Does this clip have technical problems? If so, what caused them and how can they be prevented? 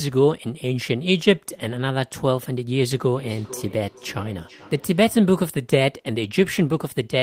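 Yes. From 2.94 to 5.48 s there is feedback echo between two devices, with the speech returning roughly every 0.4 s, about 19 dB down. A fixed repeat interval distinguishes it from room reverberation. Use one device per room or wear headphones.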